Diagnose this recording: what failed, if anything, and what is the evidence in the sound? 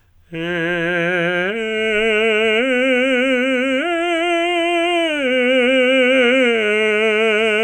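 Nothing in this music recording points to a failure at any stage of the chain, from capture through conversion, buffering, encoding, transport or playback.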